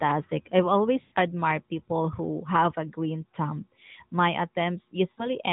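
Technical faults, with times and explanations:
1.02–1.13 s, lost AMR speech frames: about 100 ms of speech frames failed decoding, so the narrowband AMR decoder, already limited to below 4 kHz, repeated the last good pitch and vocal-tract settings at falling gain, drawing the sound out into a fading warble.
5.12–5.28 s, lost AMR speech frames: a shorter run of about 60 ms was concealed the same way, giving a brief smeared, dipping stretch before the decoder resumed with good frames.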